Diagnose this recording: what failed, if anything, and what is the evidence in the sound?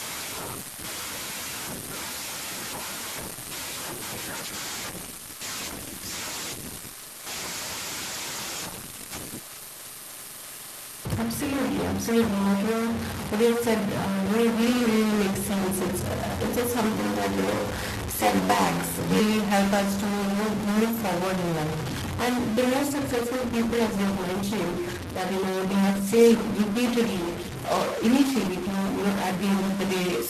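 A distortion runs through the whole recording, and the pauses fill with a hiss that tracks the signal's sign rather than staying silent. That points to a stuck bit, likely in the converter or its data lines. Clipping would stay clean in pauses.

From 4.38 to 10.71 s and again from 22.89 to 30.13 s the speech turns coarse, watery and muffled, with high frequencies cut. This is a call bitrate drop at the network and codec stage, from 32 to 16 kbps and then from 32 to 14 kbps. Each dip sits at its lowest for roughly 5 to 6 seconds. Packet loss would instead leave gaps.

Between "uh it's just" (16.92 s) and "help us" (19.20 s) a buzz at 93.8 Hz appears, and the speech runs slower, at 0.861 times normal speed, with nearly unchanged pitch. This is a block size mismatch (padded) in the driver or buffer stage, which fits a 512-sample read block. A resampling error would lower the pitch too.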